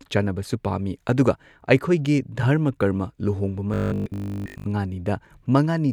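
From 3.74 to 4.66 s the speech becomes robotic sound from repeated short buffers: a rigid, metallic 50 Hz buzz, likely from new audio arriving too seldom, with a chunk of about 20 ms replayed nearly throughout. A spectrogram shows flat harmonic stripes every 50 Hz, and the waveform shows identical repeating cycles.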